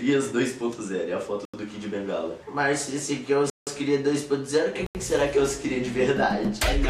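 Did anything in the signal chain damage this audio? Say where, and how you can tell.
Yes: blocks of digital silence at 1.45, 3.50 and 4.86 s. The 85 ms and 170 ms holes suggest unfilled 4096-sample output buffers.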